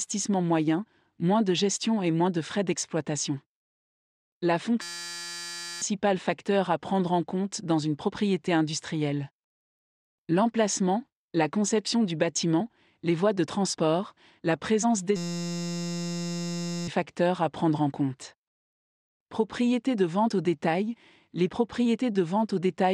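At 4.82 s the audio gives way to a steady, flat buzz pitched near 172 Hz that lasts until 5.82 s, and the same buzz returns from 15.16 to 16.88 s. Each is a system hang loop: the system stalled while the sound hardware kept replaying one 5.8 ms slice of its ring buffer, which fits a 256-sample buffer. About a second of audio is lost at the first event and roughly one and a half seconds at the second.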